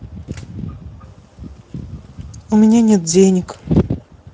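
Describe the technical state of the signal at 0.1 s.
Speex codec damage covers the whole clip, including 0.1 s: scarce excitation bits make the speech hoarse and grainy, not the watery swirl of transform codecs, which fits roughly 17 kbps.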